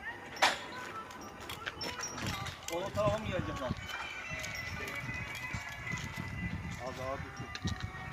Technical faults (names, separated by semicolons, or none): timecode bleed